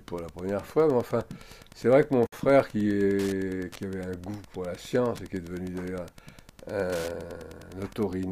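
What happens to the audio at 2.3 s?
Separately encoded pieces were joined without trimming the encoder's start-up delay and end padding, so a gap at a join of encoded pieces opens from 2.27 to 2.32 s. The sound drops into a 59 ms gap whose edges are smeared, so the silent part is shorter, then resumes where it stopped. Joins recur every 6 s.

Meanwhile, a nearby Wi-Fi radio's transmissions are being rectified by the audio circuit, so Wi-Fi interference runs through this moment. Its beacon, repeating every 102.4 ms, produces a steady ticking nearly ten times a second, sitting about 25 dB below the sound.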